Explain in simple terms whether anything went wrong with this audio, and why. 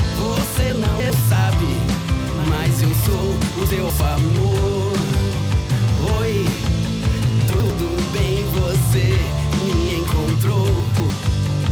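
Four brief jumbled moments, at 0.7 to 1.1 s, 3.7 to 4.0 s, 7.5 to 7.7 s and 10.8 to 11.1 s. This is chunks out of order. The audio travels in small pieces, here apparently about a tenth of a second each. In each spot, one piece arrived late and played after the pieces meant to follow it. Nothing goes missing, but the reshuffled bits sound scrambled.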